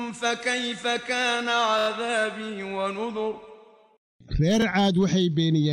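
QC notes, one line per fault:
1.79–1.88 s, repeated buffer: the same 23 ms slice plays four extra times with a hard join at each repeat, heard as a rapid stutter or buzz. Unlike a dropout there is no silent gap, and the size fits a 1024-sample buffer.
4.62–4.64 s, repeated buffer: the same 23 ms slice replays once, giving a single click-like hiccup. Nothing is cut out, which sets it apart from a skip.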